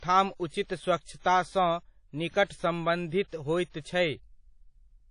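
It's a speech clip with plainly audible codec damage all the way through. There's a washy, ringing quality, hiss that swells and fades with the voice, and nothing above about 10.1 kHz. That points to WMA compression, likely at a low bitrate around 32 kbps. There's also pre-echo from 3.70 to 3.74 s. A sharp attack sits late in a transform block, so about 43 ms of quantisation noise leaks in ahead of it, and you hear a brief hiss before the onset, which comes out smeared.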